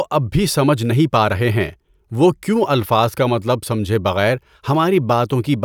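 At 1.65 s a single sharp click cuts through the speech, the mark of dropped samples. Roughly one sample is likely missing from the stream, so the waveform steps abruptly to a later value; the gap is far too brief to remove any sound.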